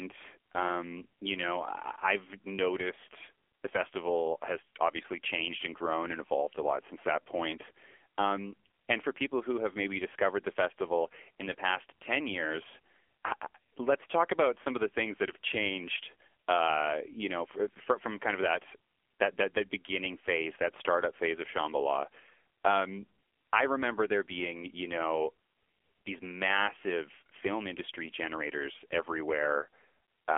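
AMR narrowband mobile codec damage runs throughout the speech. The sound is confined to a telephone band of roughly 300 Hz to 3.4 kHz, with nothing above 3.6 kHz, and its heavy buzzy, synthetic quality points to a low mode near 6.7 kbps.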